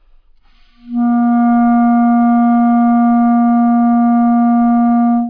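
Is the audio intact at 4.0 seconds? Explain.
Yes, the audio is intact at 4.0 seconds, with no dropout, click, distortion or other fault at that moment.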